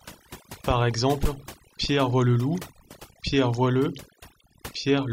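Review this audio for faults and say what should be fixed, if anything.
Overdone noise removal runs through the whole recording. A noise reduction stage was pushed too hard. Each frequency band that sits near its noise estimate is cut deeply or shut off. Quiet parts of the speech fall below that line and vanish with the noise. The gaps between phrases drop to near silence with twinkling specks. To prevent it, set the reduction gentler and leave a little noise floor in place.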